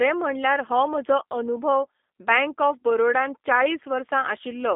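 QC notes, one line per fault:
throughout, G.729 codec: the speech is rebuilt from a vocal-tract filter, a pitch predictor and sparse pulses every 10 ms, leaving a plainly rough, synthetic edge. The band runs 250 Hz to 3.6 kHz with nothing above 3.7 kHz, which fits an 8 kbit/s G.729A link.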